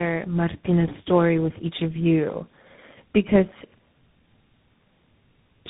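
The call passed through three different speech codecs in a row, being decoded and re-encoded at each link: tandem speech coding, with a final stage that points to CVSD. Each coder stacks its damage onto the last, leaving this speech rough, warbly and muffled throughout, with nothing above 3.8 kHz.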